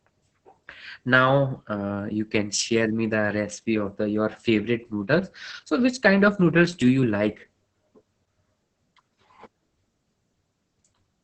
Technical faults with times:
0.00-11.23 Opus voice compression

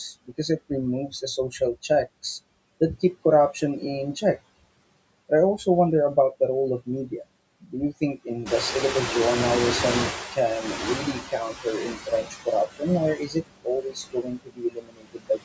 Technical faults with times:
0.00-15.45 noise suppressor artifacts
7.60-8.29 speech cut by the noise suppressor
8.45-11.25 noise suppressor catching up
11.02-12.88 speech cut by the noise suppressor
13.16-15.40 speech cut by the noise suppressor

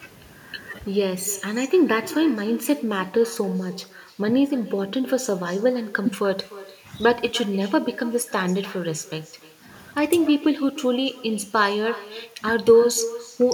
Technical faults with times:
0.00-13.53 echo with no canceller

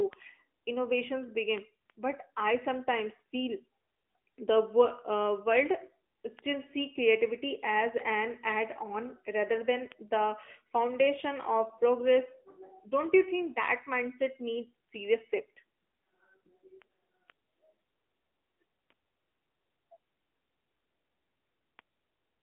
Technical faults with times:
0.00-22.42 AMR narrowband mobile codec

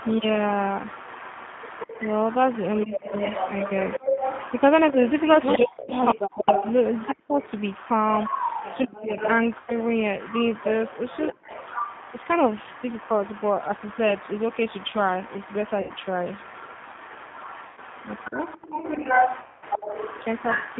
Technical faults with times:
0.00-20.79 G.729 codec
0.00-20.79 echo leak
5.57-7.39 speech suppressed in double talk
5.84-5.92 VoIP packet loss concealed by the speech codec
8.86-9.19 speech suppressed in double talk
9.60-9.73 VoIP packet loss concealed by the speech codec
11.32-11.53 speech suppressed in double talk
15.81-15.92 VoIP packet loss concealed by the speech codec
17.67-17.80 VoIP packet loss concealed by the speech codec
18.28-18.42 speech suppressed in double talk
19.42-19.64 VoIP packet loss concealed by the speech codec

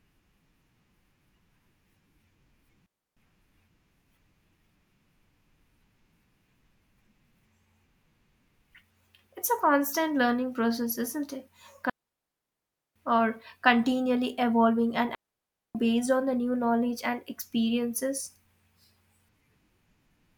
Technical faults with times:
2.86-3.17 digital wireless dropout
11.90-12.96 digital wireless dropout
15.15-15.75 digital wireless dropout

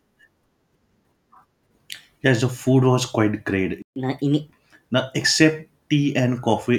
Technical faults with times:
3.82-3.96 playback stall
3.96-4.51 catch-up at higher speed

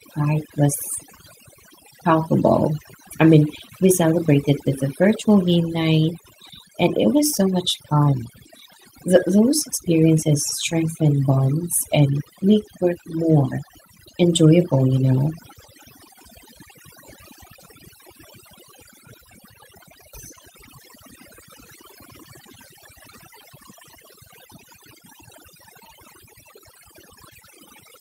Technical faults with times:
0.00-28.01 overdone noise removal

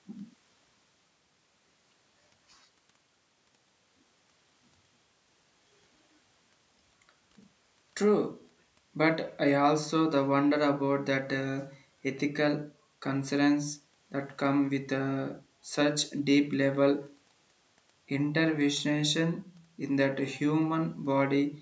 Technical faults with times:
none

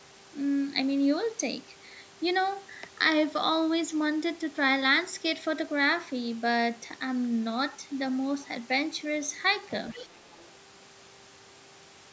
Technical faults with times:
9.87-10.43 other side's voice leaking through

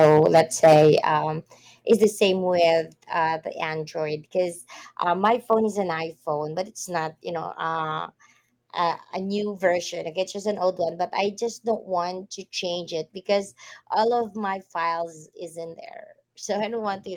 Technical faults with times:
0.00-0.98 microphone overload
1.02 microphone volume stepped down
1.91-2.04 microphone overload
2.04 microphone volume stepped down
5.24-5.54 microphone overload

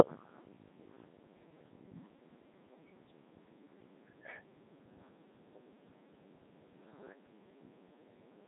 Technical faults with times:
0.00-8.48 Codec 2 vocoder

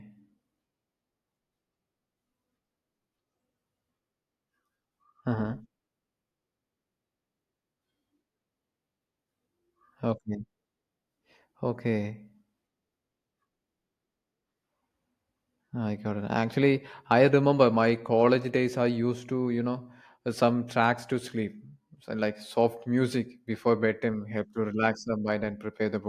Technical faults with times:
none

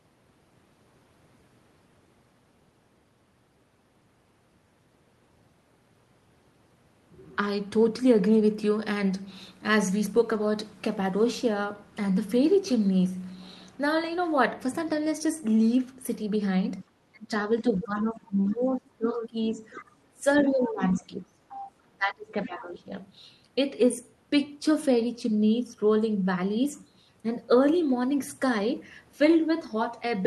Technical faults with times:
16.79-16.83 other side's voice leaking through
16.84-22.93 speech suppressed in double talk
17.99-18.55 other side's voice leaking through
19.16-19.83 other side's voice leaking through
20.64-20.71 other side's voice leaking through
21.49-21.72 other side's voice leaking through

